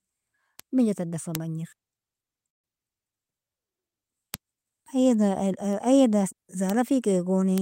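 A single sharp tick lands at 0.60 s, just before "minja tadan fa bajner", and another at 1.35 s, right after "minja tadan fa". These are bit error spikes: one sample jumps by a power of two and snaps straight back, giving a broadband click unrelated to the speech around it. The same tick returns at 4.34 s, 6.70 s and 7.58 s, each a single-sample event.

At 1.73 s, after "minja tadan fa bajner", the speech skips forward with a hard join and no pause, as though roughly a fifth of a second was cut out. This is audio missing between chunks, likely from a capture process working in 2.5 s blocks and dropping a short stretch while switching from one block to the next. The two sides are butted together, so the jump is heard as an abrupt lurch.

From 2.49 to 2.66 s the sound stops for about 140 ms and then resumes where it left off. This is a call audio freeze, likely caused by packets arriving late enough that the jitter buffer emptied. 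The receiver filled the wait rather than skipping ahead, so a 143 ms gap was inserted and nothing was lost. The speech simply stalls and carries on.

The chunk skip recurs at 6.33 s, with the same sudden forward jump.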